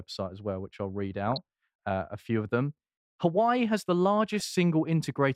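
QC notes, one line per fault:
1.28–1.38 s and 4.35–4.41 s: DAB burbling. Brief noise blips over the speech, about 100 ms then 60 ms long. Bit errors from weak reception slipped past error correction, so corrupted samples put short noise blips in single sub-bands, across 7 and then 4 frames.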